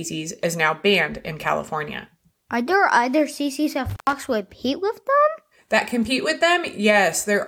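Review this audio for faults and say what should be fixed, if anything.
Between 3.90 and 4.13 s the speech shows an intermittent contact fault: a loose cable or plug briefly loses connection, and the signal drops out for about 109 ms, with crackle as the contact breaks and remakes. On a waveform this appears as a sudden collapse to near-flat with spiky bursts at both edges. On a spectrogram it shows as a dark gap bounded by broadband vertical streaks, with only a faint hiss floor inside. Reseat or replace the suspect cable and connectors, and secure them with strain relief so movement can't open the contact during recording.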